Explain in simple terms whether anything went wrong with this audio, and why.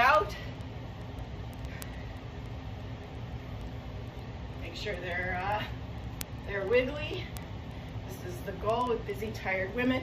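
Something did go wrong. From 0.15 s to 9.97 s the audio carries word clock ticks. These are sharp clicks of uneven strength repeating at a steady pace, around twenty per second, well over a hundred in all. The audio passed between two digital devices whose clocks were not locked together. They ran at slightly different speeds, off by a few hundred parts per million. Each time the clocks slipped, a single sample was lost or doubled, and that left a tick.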